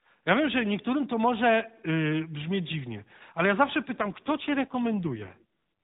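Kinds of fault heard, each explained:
AMR rate drop, 3.98 to 5.44 s: right after "dziwnie ale ja zawsze" the speech turns rougher and more synthetic, with a buzzy, reconstructed edge, yet the band stays the same and nothing drops out. That points to the mobile link forcing the AMR codec down from its 12.2 kbps mode to around 5.9 kbps, so fewer bits describe each 20 ms frame. The narrowband ceiling near 4 kHz is heard throughout.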